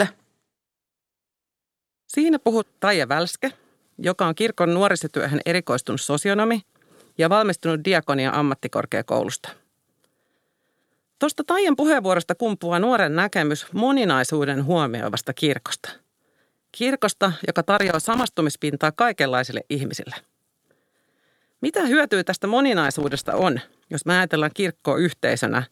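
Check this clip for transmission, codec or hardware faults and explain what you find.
Two bursts of loose connector crackle, at 17.78–18.24 s and 22.84–23.42 s, the second between "hyötyä tästä" and "jos me ajatellaan". A worn contact intermittently breaks the line, chopping the speech, heard as irregular scratchy crackle.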